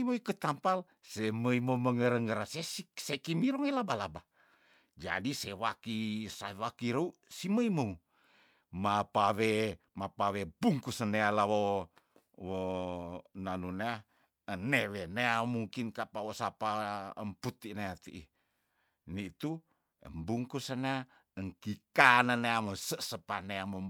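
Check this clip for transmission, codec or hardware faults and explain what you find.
Listening closely to the speech, nothing stood out as a problem anywhere in the recording.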